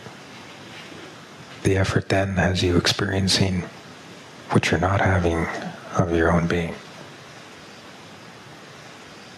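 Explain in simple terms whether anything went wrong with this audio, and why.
Something did go wrong here. The whole clip has gain pumping. The level keeps being pulled down on loud sounds, and this runs from start to finish. The swing is large. Loud and soft moments end up squeezed close together. The likely cause is a recording level set far too high, with an automatic limiter clamping it down on every loud sound.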